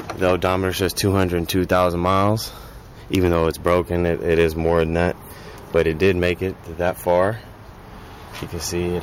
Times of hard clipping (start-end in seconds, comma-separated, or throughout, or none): 1.72-2.30, 3.14-5.06, 5.76-6.31, 6.87-7.25